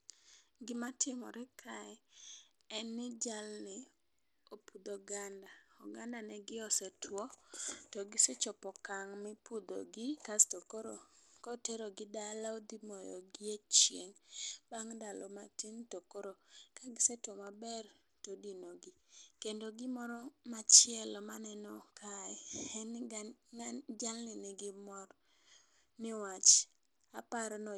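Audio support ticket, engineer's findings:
Bluetooth SBC compression, whole clip, speech. Treble thin and flickering, gritty grain riding on the voice throughout. Likely an SBC link at a low bitrate, around 96 kbps: coarse sub-band quantisation starving the top bands, so highs drop in and out with aliasing hash.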